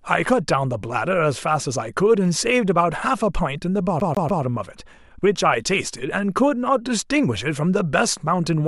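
At 4.00 s the speech catches on a CD stuck on one turn. A slice of about 144 ms plays three times before moving on at 4.43 s. Each jump back leaves a tiny mute. The result is a quick, even stutter, like a skipping disc.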